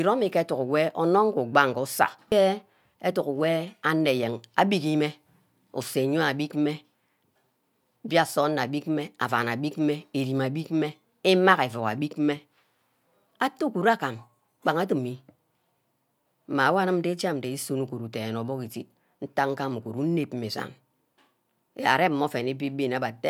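No technical faults are audible anywhere in the recording.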